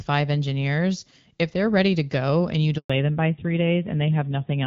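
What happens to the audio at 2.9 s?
Right after "to go and you", a handover gap silences the audio from 2.78 to 2.90 s. For 120 ms, nothing arrives while the call is passed from one network link to another. The sound fades within a few tens of milliseconds and stays dead until the new link starts. On a waveform this appears as a short flat stretch. A spectrogram shows a narrow blank vertical band across all frequencies.

When the sound returns at 2.90 s, a fallback to narrowband takes hold and lasts to the end of the clip. The call has moved from the HD Voice wideband path, which was clear and only lightly coloured before the gap, to an older narrowband coder. The harsher grain points to a low rate of about 7.4 kbit/s. Nothing remains above 4 kHz, so the speech turns duller, muffled and somewhat rough. A spectrogram shows the upper energy cut off sharply at 4 kHz from this point on. The waveform looks smoother, with less fine detail.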